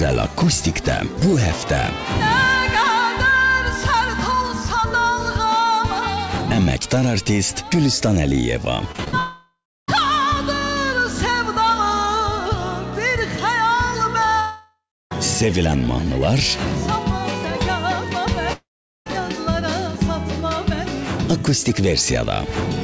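From 8.92 to 9.14 s, repeated packet loss strikes four times in quick succession, the longest gap 45 ms. The receiver patches each hole by stretching the last sound, so nearly half that span is filled in, giving a choppy texture with pieces missing.

Three long network dropouts follow, at 9.18–9.90 s, 14.40–15.13 s and 18.53–19.11 s, each likely caused by audio failing to arrive for over half a second. The continued sound decays into silence lasting about 0.32, 0.33 and 0.43 s respectively, then audio resumes with that stretch lost. Throughout, nothing reaches above 8 kHz, which fits a 64 kbps G.722 call codec.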